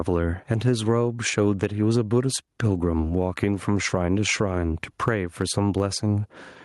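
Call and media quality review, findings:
Gain pumping throughout the speech. Gain swing around 15 dB. Loud and quiet passages squashed together. Likely cause: input gain far too high, fast limiter/compressor clamping every peak.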